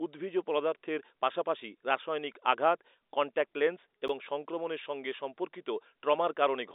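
At 4.08 s a block of samples was replaced by zeros, leaving a block of digital silence 11.6 ms long, which fits a 512-sample buffer. The speech, band-limited to 300 Hz to 3.7 kHz by its G.711 telephone coding, drops straight to silence and back with no fade, heard as a tick or dip.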